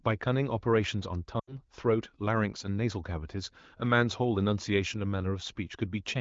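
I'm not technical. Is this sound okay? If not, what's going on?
No. There are lost AMR speech frames from about 1.39 to 1.60 seconds. A phone call sends speech in small chunks, and here about 80 ms of them arrived damaged and were thrown away. The decoder filled the gap by repeating the last good sound while turning it down, so the voice smears briefly and fades toward silence, then returns briefly weak or rough. Because this is an HD Voice (AMR wideband) call, that fade happens quickly.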